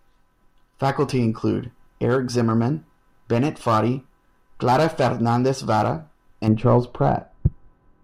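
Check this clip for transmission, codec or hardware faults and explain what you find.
One fault is present: de-emphasis applied wrongly, from 6.47 s to the end of the speech. A treble-cut filter meant to reverse pre-emphasis has acted on audio that needed no such correction, so the response tilts smoothly downward, reaching about 11 dB lower at 10 kHz than at 1 kHz. The voice turns dull and muffled, with softened sibilants. On a spectrogram the upper bands fade gradually rather than cutting off sharply, and the waveform looks rounder, with fewer sharp transients.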